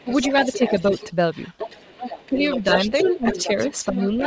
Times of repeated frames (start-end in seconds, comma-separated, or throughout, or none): none